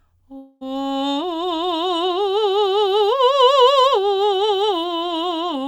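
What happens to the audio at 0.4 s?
A long network dropout runs from 0.37 to 0.63 s, likely caused by a stretch of audio never arriving. About 240 ms of the music is lost, and the receiver covers nearly all of it with a fading buzz or hiss continuing the last sound before the music resumes further on.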